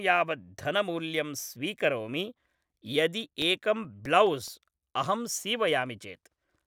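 CD scratch ticks, 3.21 to 4.69 s: eight brief clicks, a few milliseconds each, recur with each disc rotation where the player patches over unreadable data.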